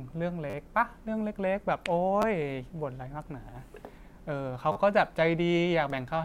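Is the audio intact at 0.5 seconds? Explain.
No. From 0.50 to 0.54 s there is a repeated buffer: fresh audio did not reach the playback device in time, so it replayed the last chunk of speech it already held several times over. The chunk length fits a 10 ms buffer, so the hard joins come every 10 ms and the stutter fuses into a brief buzz at about 100 Hz, lasting roughly 40 ms. Practically no audio appears to be lost.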